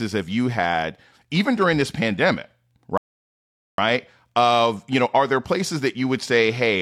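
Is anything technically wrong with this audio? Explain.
Yes. From 2.98 to 3.78 s the speech cuts abruptly to silence, then picks up exactly where it left off with nothing missing. This is a rebuffering stall: the player ran out of downloaded audio and waited for more, adding about 0.81 s.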